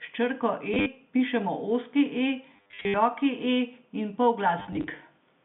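Packet loss with last packet repeated strikes at 0.74–0.86 s before "pišemo ozki e", 2.56–2.94 s after it, and 4.6–4.88 s. The receiver replayed stale audio in short runs, fitting roughly 10 ms packets, producing robotic stutters buzzing near 100 Hz through the narrow telephone band.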